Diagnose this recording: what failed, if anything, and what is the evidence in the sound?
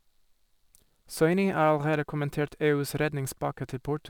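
Sample clock jitter in the converter, throughout. Hiss rises on loud, bright speech and vanishes in pauses. Timing errors of a few microseconds cause it.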